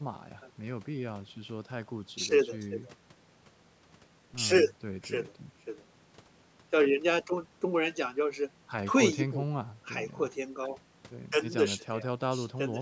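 No technical faults are audible.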